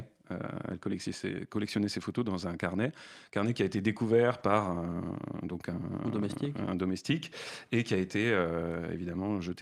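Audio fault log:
2.01 s, 4.39 s and 6.33 s, lost packet rebuilt from error correction: each time about 20 ms, likely a single packet, goes rough and noisy, after "collectionnait ses", "qui a été découvert" and "donc un". Nothing drops out, because the decoder played a low-bitrate backup copy carried in the next packet.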